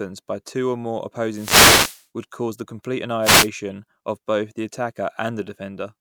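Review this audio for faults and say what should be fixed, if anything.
Wireless microphone noise hits at 1.29–2.06 s and 3.22–3.49 s: the analogue FM radio link fades as reflected signals cancel, so receiver noise rises into bursts of static. To prevent it, use diversity receivers and keep antennas in clear line of sight.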